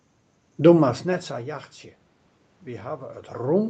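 No technical faults are audible.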